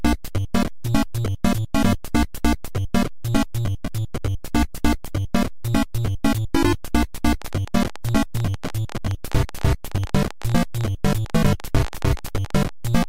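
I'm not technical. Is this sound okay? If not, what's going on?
No, not quite. From about 7.42 s right to the end at 13.05 s there's a train of clicks: roughly 70 little ticks or pops, around 14 every second, arriving at an uneven pace and sitting on top of the sound, even in the quieter gaps. That's likely something outside the sound itself sneaking pulses in, like electrical interference from nearby gear or a faulty connection or power supply.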